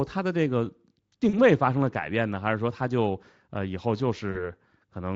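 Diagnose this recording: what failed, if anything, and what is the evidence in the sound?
The network stage failed: VoIP packet loss concealed by the speech codec, at 1.29 to 1.38 s and again at 4.31 to 4.50 s. Each gap of about 40 ms, which fits two lost 20 ms frames, is filled by the decoder repeating its last pitch and filter at falling gain, so the speech smears into a fading buzzy tone or coloured noise, then stays thin after packets resume. A buffer underrun would instead leave a hard silence or click, without that decaying tail and slow recovery.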